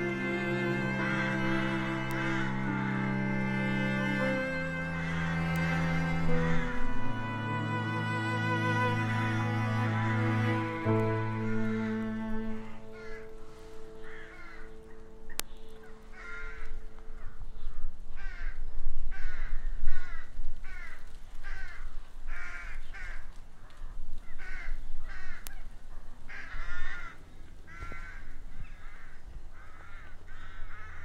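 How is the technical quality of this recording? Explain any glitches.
Four isolated clicks mar the recording, all bit error spikes, at 2.11, 5.56, 15.40 and 25.47 s. Each is a single flipped bit that throws one or two samples off by a power of two before the waveform snaps back, reaching about -15, -15, -3 and -9 dBFS. Each one is heard as a sharp, dry tick unrelated to the surrounding sound. On a waveform it shows as a lone needle, and on a spectrogram as a thin vertical line across all frequencies.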